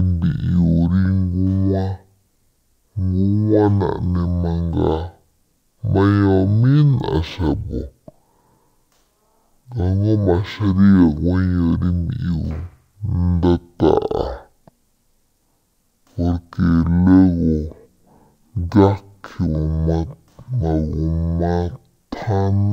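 Stereo read as mono throughout the speech: interleaved left and right samples play back as one channel, so everything runs at half speed, an octave low.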